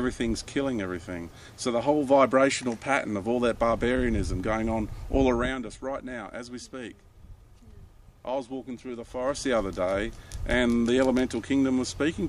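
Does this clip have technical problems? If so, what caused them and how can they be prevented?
Yes. Zipper noise appears from 5.23 to 5.58 s, as the level drops by about 10 dB, and from 9.07 to 9.5 s, as it rises by about 10 dB. The gain moves in unsmoothed steps, around a hundred per second, each adding a tiny click that together form a zipping texture. Interpolating the gain per sample across each change would prevent it.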